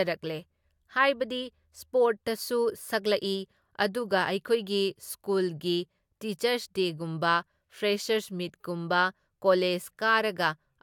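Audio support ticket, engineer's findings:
Listened through the speech recording and found nothing to flag, so no fault to report on this ticket.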